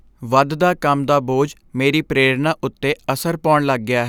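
Nothing stood out on listening to this speech recording.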